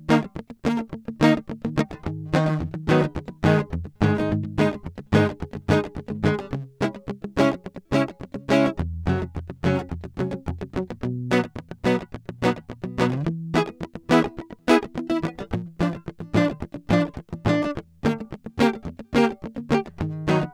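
Nothing technically wrong turns up in this music clip; there are no faults to point to at any moment.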